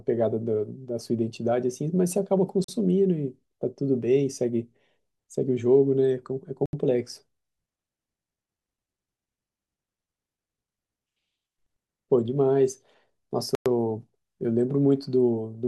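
Speech drops to dead silence three times, for 41 ms at 2.64 s, 75 ms at 6.66 s and 108 ms at 13.55 s, each time resuming where it stopped or slightly later. These are likely Bluetooth stalls: interference delayed packets, the headphone buffer emptied, and playback waited for retransmissions.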